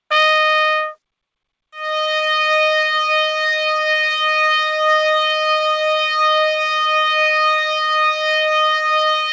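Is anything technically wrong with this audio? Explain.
Yes. There is clock drift between sender and receiver throughout: the sender's clock runs roughly 3% slow, so the jitter buffer keeps draining. Unlike a single dropout, this causes small timing hiccups spread unevenly across the whole clip rather than one isolated event.

Repeated timing corrections run from 0.31 s to the end at 9.33 s. The receiver stretches the sound to about 98% speed, repeating short pieces to cover the shortfall and adding roughly 200 ms overall. This is heard as a slightly dragging, unsteady tempo, not as clicks or holes.

Scattered short gaps occur in two stretches, 3.4 to 5.03 s and 7.26 to 8.9 s, each with around seven tiny losses, the longest about 10 ms. Each hole is patched by continuing the last sound, so it comes across as a brief tick or smear. The timing corrections instead produce an uneven drag.

The audio also passed through a call path whose G.722 coding, at what fits 64 kbps, leaves nothing above 8 kHz.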